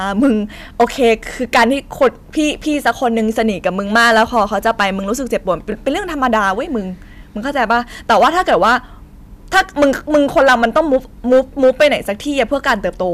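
A speech recording with harsh crackle on every loud syllable, which is hard clipping: the signal is driven about 11 dB past what the chain can pass, flattening peaks in roughly 3% of samples. Brief stutters at 5.72–5.74 s and 7.18–7.20 s are a repeated buffer, where one short slice plays twice, consistent with a 20 ms buffer replayed when new audio arrived late.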